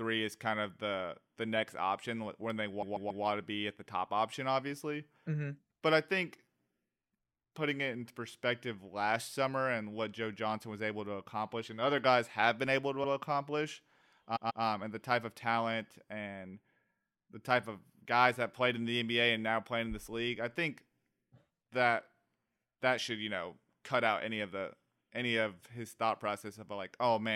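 At 2.81 s the speech stutters: a 139 ms block, which fits about six compressed frames, plays three extra times, adding 418 ms before normal playback resumes at 3.23 s. At 13.03 s a 70 ms block repeats once, and at 14.35 s a 139 ms block repeats twice, up to 14.63 s. These are repeated frames, where the decoder replays the same stretch of data. A spectrogram shows identical patterns tiled side by side, with a thin vertical line wherever a seam fails to match.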